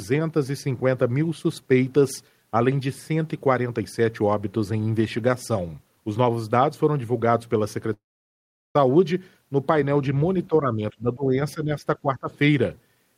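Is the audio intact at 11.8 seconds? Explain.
No. From 11.55 to 11.84 s the speech is suppressed in double talk. With both sides likely speaking at once, the echo canceller could not separate the near talker from the loudspeaker echo and pulled the level down on everything it heard. The speech dips by up to about 10 dB, with around 150 ms of that stretch audibly thinned or ducked.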